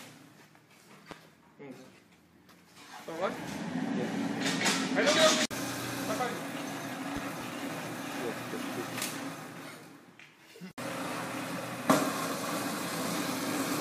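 A sudden voltage step, likely from a plug, switch, static discharge or driver glitch, enters the signal path twice, and the circuitry downstream shapes each step into a brief pulse. The first loud pop, from 1.11 to 1.14 s, is a single sharp crack. From 7.17 to 7.44 s a second event arrives as two pops in quick succession. Both peak roughly 10 dB above the surrounding audio, which continues underneath.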